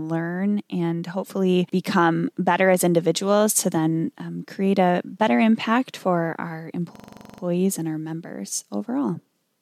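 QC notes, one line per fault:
6.96–7.42 s: system hang loop. A 42.67 ms slice repeats 11 times, stuttering at 23.4 Hz. This fits a frozen system's 2048-sample ring buffer replaying.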